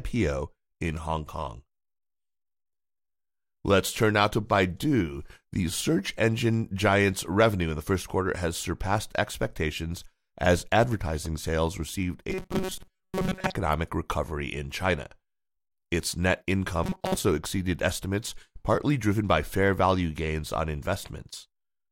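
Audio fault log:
12.30–13.54 s and 16.84–17.17 s: robotic sound from repeated short buffers. The speech locks into a rigid metallic buzz near 188 Hz, likely from a 5 ms fragment replayed over most of the audio. Unlike a stutter, the words remain faintly traceable.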